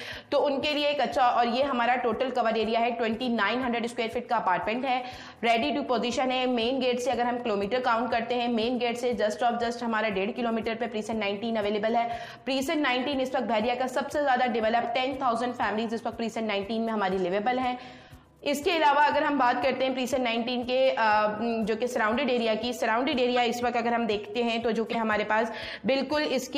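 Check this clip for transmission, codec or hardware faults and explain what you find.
The clip has four brief corrupt frames decoded: at 14.82 to 14.86 s, 18.07 to 18.15 s, 23.35 to 23.38 s and 24.92 to 24.95 s. Each spans only two or three codec frames. Flipped bits made the decoder misread gains or spectral codes, so it placed energy at the wrong frequencies and produced short chirps or noise bursts. The error peaks near -20 dBFS, only faint at 18.07 s and loudest at 24.92 s. Unlike concealed packet loss, which mutes or smears the sound, these add energy that doesn't belong.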